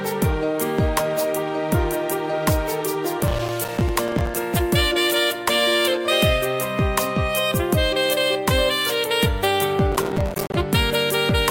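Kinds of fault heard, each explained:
Processor overload crackle: gritty crackle tears through the sound from 3.2 to 4.35 s and from 9.92 to 10.54 s, built from dozens of tiny hard-edged silent gaps. The processor keeps missing its deadlines for buffers a few milliseconds long.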